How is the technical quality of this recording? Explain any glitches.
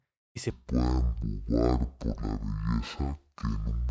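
Quality is poor from 0.5 s after "y se" to the end at 3.9 s, where a wrong sample rate takes over. Audio captured at 32 kHz is played at 16 kHz with no conversion, so it runs at half speed and a full octave lower. The speech turns slow, deep and dragging. On a spectrogram, formants and harmonics sit at half their normal height and stretch out in time. The waveform looks drawn out sideways.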